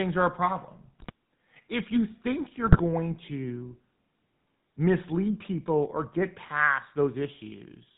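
Throughout, the speech has the gravelly buzz of the GSM full-rate codec, which fits a 13 kbps coder. Its pulse-driven excitation sounds rougher than simple band-limiting, and nothing passes above 4 kHz. At 0.99–1.12 s and again at 2.66–2.81 s, GSM bit errors corrupt the decoded filter, pitch and gain values, causing squawks and gargling level jumps rather than silent dropouts.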